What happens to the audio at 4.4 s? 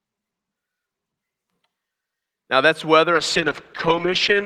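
At 4.4 s a call bitrate drop is in effect, from 3.14 s to the end. The encoder falls from 48 to 9 kbps, so speech turns coarse, watery and muffled.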